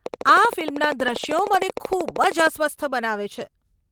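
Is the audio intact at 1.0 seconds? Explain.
No. A train of clicks runs from 0.06 to 2.48 s, so it covers 1.0 s. Something in the chain is injecting a short pulse at a steady 12.9 times per second, most likely electrical interference or a faulty connection or power supply. That produces about thirty near-identical ticks, evenly spaced. They peak about 10 dB above the speech and are clearly audible over it and through its pauses.

Just after that moment, from 1.03 to 1.65 s, the audio shows a lost packet rebuilt from error correction. Packets went missing in transit. The decoder filled each one from the low-bitrate backup copy carried inside the packet that followed it, so no gap opens. The 320 ms of rebuilt audio points to about sixteen lost packets of 20 ms each. Because those backup copies are coarser, that stretch sounds rougher and noisier than the speech around it.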